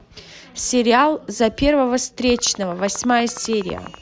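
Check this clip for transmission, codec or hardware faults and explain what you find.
One fault is present: a train of clicks running from 2.3 s to 3.95 s. It sounds like steady, evenly spaced ticking laid over the speech, about 12 clicks per second, around twenty in all, each peaking roughly 5 dB above the speech. The clicks all share much the same sharp shape. The likely cause is an external pulse source, such as interference from nearby equipment or a faulty connection or power supply.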